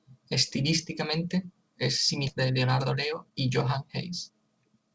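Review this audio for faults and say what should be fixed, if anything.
At 2.28 to 2.30 s there's a skip ahead: about a second of speech just vanishes, and the two sides are butted together with no fill at all. It sounds like the jitter buffer overflowed and threw out a chunk while newer audio was already queued, so playback jumped forward.

Right after that, from 2.34 s to the end, there's a jitter buffer speed-up. The speech runs at about 118% with the pitch unchanged, so it comes across as rushed. The receiver kept trimming tiny pitch-period slices, dropping roughly half a second in total, to drain a backlog that had built up.

The G.722 path itself comes through as you'd expect, with nothing above 8 kHz. To prevent both faults, give the jitter buffer more headroom and let it shrink its delay more gradually rather than dumping or compressing audio so hard.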